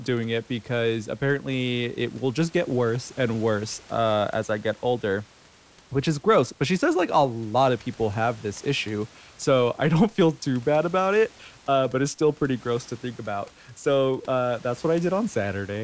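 Speech over a call path with a G.722-style band limit, nothing above 8 kHz, and room noise about 30 dB below the speech, with no technical faults to report.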